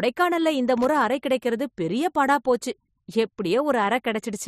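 A worn or dirty contact briefly made and broke, chopping the signal. This loose connector crackle runs from 0.78 to 0.85 s as irregular scratchy bursts, just before "அறை கிடைக்கிறது".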